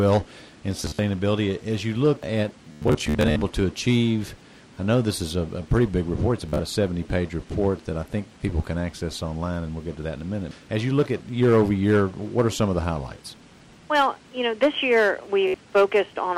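Bluetooth stutter breaks the sound at 0.77–0.99, 2.72–3.42, 6.49–6.60 and 15.48–15.54 s, as lost packets make the receiver repeat short slices as a buzzy stutter.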